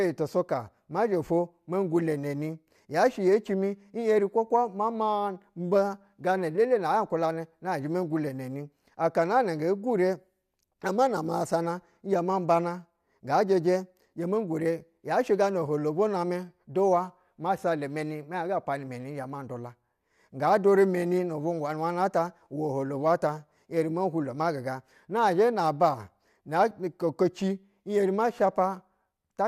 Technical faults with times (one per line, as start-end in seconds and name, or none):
none